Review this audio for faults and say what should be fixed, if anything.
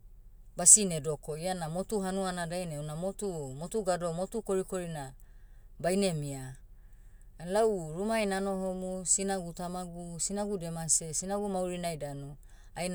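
Nothing in this speech recording needs fixing. No faults can be heard anywhere in it, so no changes are called for.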